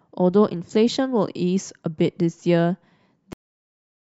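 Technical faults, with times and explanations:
3.33 s to the end, cut-off end: speech stops mid-sound and falls straight to digital silence with no decay, as the final buffers were never written or played. The waveform goes abruptly flat, and the spectrogram shows energy ending at a hard vertical edge, then nothing.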